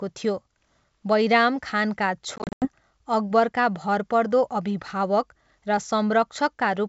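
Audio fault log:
2.36–2.68 s, packet loss on an ADPCM call: about 190 ms of audio drops to hard-edged silence in gaps scattered over 260 ms, the longest 90 ms. This fits roughly twenty lost packets. At "अकबरका भरपर्दो" the G.722 decoder's predictor and step size are out of step, so the speech returns slightly distorted before it resettles.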